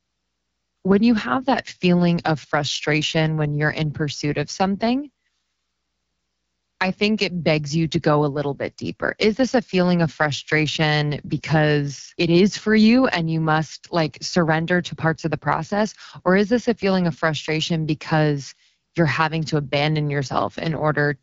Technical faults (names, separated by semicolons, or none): AMR wideband (HD Voice) codec